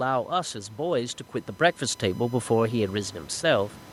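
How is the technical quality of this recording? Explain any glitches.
The recording has two technical faults: a steady USB whine across the whole clip, and an automatic gain rise in the second half.

The USB whine runs throughout as a fixed tone at 1 kHz, sitting roughly 35 dB below the speech. The USB bus draws current in 1 ms frames, and that periodic load couples into the audio through a shared power or ground path. The result is a thin, constant whine pinned at the 1 kHz frame rate.

The automatic gain rising occurs from 1.79 s to 3.81 s. The input level fell by about 11 dB, and the automatic gain control responded by raising its gain about 7 dB over roughly two seconds. The gain applies to everything in the signal, so the speech and the room noise behind it swell together.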